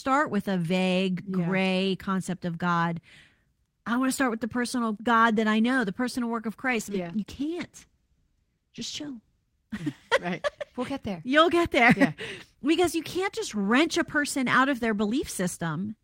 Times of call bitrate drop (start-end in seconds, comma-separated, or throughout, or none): 6.72-9.55